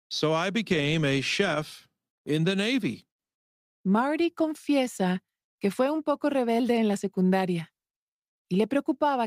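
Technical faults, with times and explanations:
Nothing in this speech recording stood out as a technical problem on listening.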